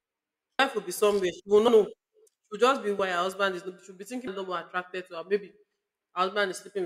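At 0.59, 1.68, 2.99 s (after "just be") and 4.27 s (after "be thinking"), compressed frames are skipped. The speech jumps ahead by roughly 0.15 to 0.5 s in steps consistent with 32 ms frames. Each join is visible as an abrupt seam in the waveform and spectrogram.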